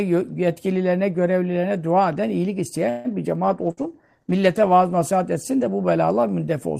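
At 2.89 s, right after "görevlilerine dua eden iyilik", the speech stalls until 3.12 s in a call audio freeze. Packets were likely held up in transit, so the jitter buffer drained and the receiver stretched the last sound into a fading buzz for about 150 ms. When delivery resumed, playback continued from where it stopped. The result is an inserted pause that pushes the rest of the speech about 150 ms later, with essentially nothing missing.

From 3.50 s to 5.57 s there is a call bitrate drop, ending just before "de bu". The bandwidth estimate fell and the Opus encoder was pushed from 32 kbps down to 16 kbps, holding the lowest rate for about 1.24 s. At that rate the coding becomes coarser and the top end is trimmed, so the speech sounds rougher and more muffled, with a watery texture, until the rate climbs back.

Inside that stretch, from 3.71 s to 3.80 s, a burst of packet loss occurs. 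Consecutive packets either never arrived or came too late to play. The receiver filled about 62 ms by extending the preceding sound and fading it down, which is heard as a brief held buzz or dying hiss. Playback then picks up further along, and roughly 60 ms of the original speech is gone.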